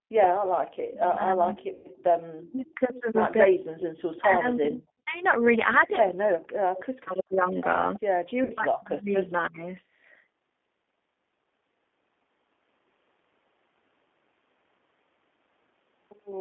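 Across the whole recording the speech has a rough, slightly synthetic edge, and nothing reaches above about 3.5 kHz or below about 250 Hz. That is the G.729 codec, here the G.729A variant at 8 kbit/s, with plainly audible damage. It rebuilds each 10 ms frame from a vocal tract filter, a pitch predictor and a handful of pulses, so fine detail is replaced by an approximation. The microphone processing's trimming of the lowest bass is normal.

From 0.07 to 1.46 s the speech dips sharply, by about 40 dB at its deepest, and drops out in pieces totalling roughly 0.7 s. The same happens from 2.52 to 2.79 s (roughly 0.2 s affected), from 4.2 to 5.16 s (roughly 0.7 s), and from 6.48 to 9.64 s, where about 2 s in all is lost. This is likely speech suppressed in double talk: with both sides talking, the echo canceller could not tell its own talker from the returning echo and turned everything down.

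Overlapping the first dropouts, from 0.74 to 2.76 s, a faint copy of the speech trails 323 ms behind, about 30 dB below it. It returns louder, about 15 dB down, from 3.78 to 4.21 s. This is likely an echo leak. The far end is playing the call on a loudspeaker, and its canceller is not removing all of what its microphone picks up, so the voice comes back delayed.

At 1.73 to 1.88 s the sound smears into a buzzy tone or a coloured noise that fades, covering 120 ms of missing audio, which fits four lost packets. The same thing recurs at 8.44 to 8.54 s over 60 ms, consistent with two packets. This is VoIP packet loss concealed by the speech codec. The decoder extends its last pitch and filter while lowering the gain, and because each frame builds on the previous one, the voice stays weakened briefly after real packets resume.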